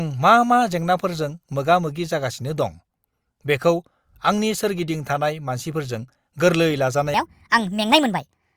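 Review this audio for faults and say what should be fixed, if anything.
After "सोरगिदिं थानाय मानसिफोरजों गोरलै", from 7.14 to 8.56 s, there's a section at the wrong speed: it runs 1.4 times fast, pitch jumping about five semitones, likely from a clock mismatch during editing or playback. Keep every segment on the same sample clock, and spot-check the tail end of an edit before export.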